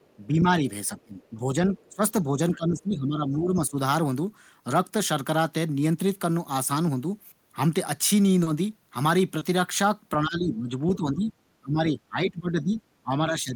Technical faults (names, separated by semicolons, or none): other side's voice leaking through; speech suppressed in double talk; short concealed packet loss